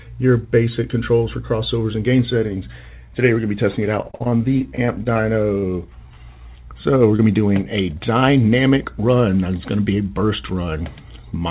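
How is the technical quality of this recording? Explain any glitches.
The recording has two packet-loss glitches. The sound is narrowband, with nothing above 4 kHz, which fits a G.711 mu-law call codec.

From 4.02 to 5.64 s there is repeated packet loss. More than a dozen holes arrive in quick succession, the longest 50 ms. Each one is patched by extending the previous sound. About a fifth of the stretch is filler, so it sounds choppy.

From 7.16 to 7.20 s there is a short concealed packet loss. About 20 ms of audio never arrived in time. The receiver filled the hole by continuing the last sound, then blended back into the real signal. It is heard as a brief smear or wobble.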